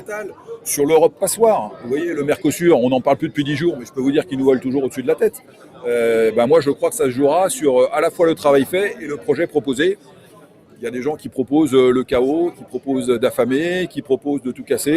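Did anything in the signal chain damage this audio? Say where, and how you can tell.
Yes. The damage comes from call processing: a speech-tuned noise suppressor was applied to music or sounds and left running for the whole clip. It treats sustained tones, ambience and decaying tails as background noise and pulls them down, so the level swings by roughly 10 dB as it engages and releases. The result is audible pumping and thinning. On a spectrogram, sustained partials break into patchy, flickering bands while transient onsets stay intact as vertical streaks.

The worst spots are where the suppressor cut the sound: 0.28 to 0.66 s, 1.7 to 1.86 s, 5.35 to 5.85 s, 8.94 to 9.29 s, 9.96 to 10.83 s, 11.17 to 11.38 s, 12.51 to 12.88 s and 13.88 to 14.26 s. Each dip is about 8 to 11 dB deep and lasts from a fraction of a second up to about a second around 10 s. On the waveform, held or fading material sags and tails are chopped short. 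Attacks mostly come through.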